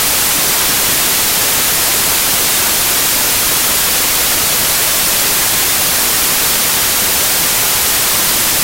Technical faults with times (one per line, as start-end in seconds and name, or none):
0.00-8.63 samples built from the wrong bytes